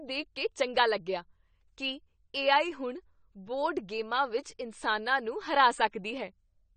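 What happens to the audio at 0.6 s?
At 0.6 s, as throughout, low-bitrate AAC compression has likely cut everything above 9 kHz, leaving the speech dull and smeared with a fizzy, warbling texture on sibilants.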